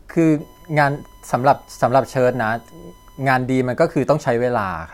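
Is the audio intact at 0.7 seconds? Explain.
No. USB whine runs from 0.40 to 3.35 s, covering 0.7 s. The bus's 1 ms frame timing draws current that leaks through power or ground, adding a steady, fixed-pitch 1 kHz tone roughly 35 dB below the speech.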